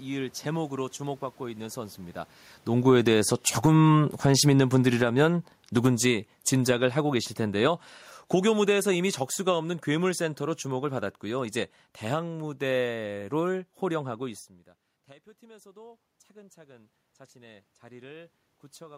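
A speech clip where automatic gain falling pulls the level down twice after the talker moves closer around 2.5 s: by about 14 dB from 2.72 to 7.81 s, then about 5 dB more from 8.36 to 11.53 s. The room noise sinks along with the voice, so the waveform envelope tapers smoothly and the spectrogram darkens evenly across all frequencies. Automatic gain rising follows once the talker pulls back around 14 s and the input drops by about 23 dB. From 15.48 to 18.93 s the gain climbs about 6 dB, so the voice and background swell together, and the waveform and spectrogram brighten gradually rather than in a step.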